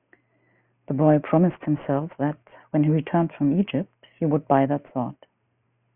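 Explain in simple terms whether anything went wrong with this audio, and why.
Aliasing runs throughout: the speech was resampled without filtering first, so sounds above 3 kHz fold back into gritty, wrong-pitched hiss.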